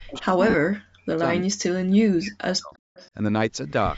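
Speech runs through a call chain here, with band-limited content stopping at 8 kHz and showing the usual call microphone processing, and three kinds of fault break it up. Speech suppressed in double talk appears from 0.00 to 1.24 s, briefly at 1.46 to 1.55 s, and again from 1.71 to 2.74 s, where the level collapses by about 40 dB for roughly a second in each long stretch. This is likely the echo canceller attenuating both sides when it can't tell the near talker from returning echo. On a waveform the envelope is pinched to near flatline in patches, and a spectrogram shows the upper harmonics thinning or whole columns going dark. Echo leak is heard at 0.07 to 0.24 s and 2.95 to 3.10 s as a faint copy trailing the speech by 0.35 s, about 25 dB and then about 30 dB below it, likely residue a loudspeaker-side canceller failed to remove. A spectrogram shows a ghostly, weaker repeat of the formant pattern shifted 0.35 s later. 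Lost LE Audio frames cause a 40 ms gap at 0.50 to 0.54 s and a 20 ms gap at 3.70 to 3.72 s, which fits losses of a few 10 ms LC3 frames. The decoder's concealment refills the missing stretch with the previous spectrum under randomised phase, so pitched sound turns briefly into a hissy smear. On a spectrogram the harmonic lines break into diffuse noise across the same band for those few tens of milliseconds, and the waveform shows the periodic shape dissolving into a noisy patch.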